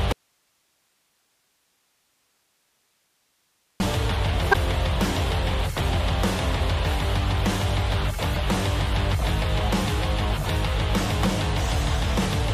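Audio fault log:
0.13–3.80 s, audio dropout to a faint residue: the sound cuts out abruptly just after the start and stays gone for about 3.7 s, leaving only a thin hiss roughly 45 dB below the normal level, before snapping back in mid-flow. The hard edges and the live hiss in the gap mark this as a break in the signal rather than a pause or fade. The likely cause is a lost feed upstream while the rest of the chain stayed open.
4.51–4.55 s and 8.32–8.36 s, damaged data in a compressed stream: each spot is a brief chirp or blip lasting about 40 ms. Corrupted bytes in the encoded stream at these points make the decoder misread the affected frames, lose its place, and hunt for the next valid frame header. That produces the garbled burst.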